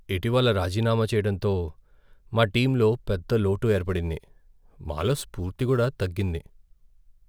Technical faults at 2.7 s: none

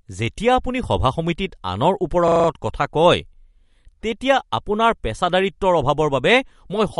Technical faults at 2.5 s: MP3 compression; system hang loop

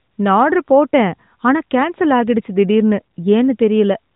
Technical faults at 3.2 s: none

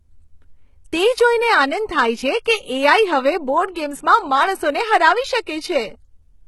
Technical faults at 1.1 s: HE-AAC compression

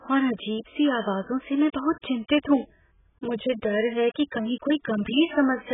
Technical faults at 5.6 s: AAC compression

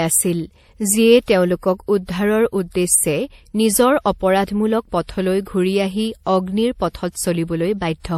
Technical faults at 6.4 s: transcoding between lossy codecs

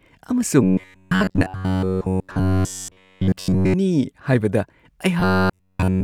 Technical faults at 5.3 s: robotic sound from repeated short buffers

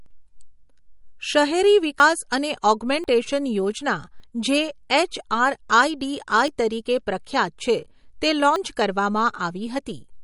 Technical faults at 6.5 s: MP3 compression; dropped buffer (overrun)

